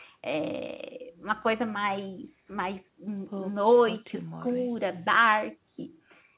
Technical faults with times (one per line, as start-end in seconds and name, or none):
none